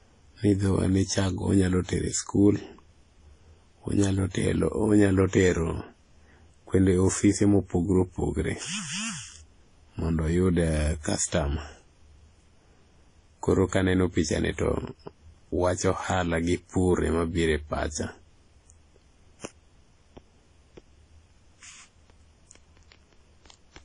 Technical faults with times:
0.00-23.85 transcoding between lossy codecs

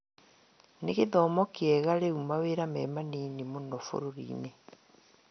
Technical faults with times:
0.00-5.31 MP2 compression

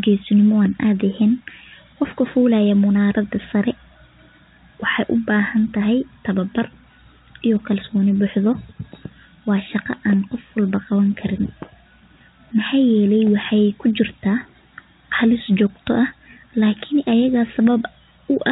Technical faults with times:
none

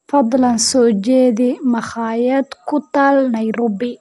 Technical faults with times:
0.00-4.01 Dolby Digital compression

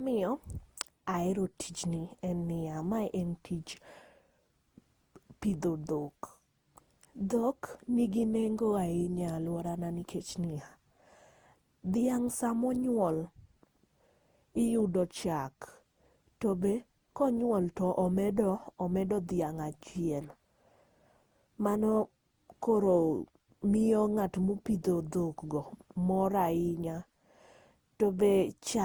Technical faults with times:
0.00-28.85 generation loss
26.98 dropped samples

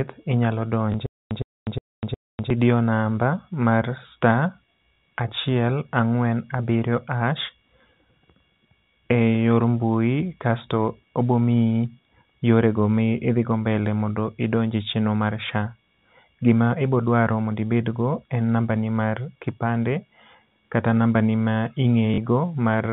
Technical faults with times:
0.92 packet loss with last packet repeated
1.06-2.50 stutter with silent gaps
4.96 packet loss with last packet repeated
22.14-22.18 packet loss with last packet repeated

